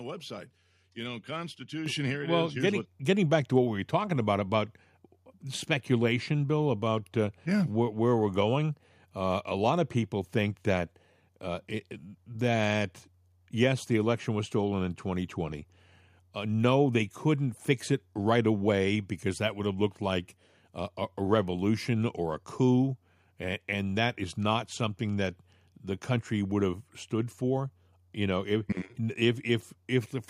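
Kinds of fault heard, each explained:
Microphone volume stepped up: at about 1.86 s the whole level of the speech jumps by roughly 7 dB in one go, right before "here it well is". The voice and the room noise rise together, so it isn't someone leaning in or talking louder. It's the input gain being pushed up at the device, the kind of one-step correction call software makes when it decides the mic is too quiet.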